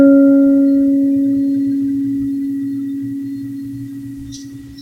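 No technical faults can be heard anywhere in this music.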